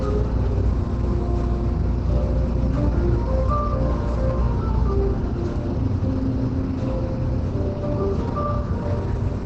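From start to finish, the audio carries heavy damage, most likely from Opus compression. Nothing is heard above about 8.6 kHz, so the top end is gone and the sound is dull. The remaining content turns muffled and hoarse. This points to the encoder running in its narrower speech mode at a very low rate, around 12 kbps. It could not hold detail across the band.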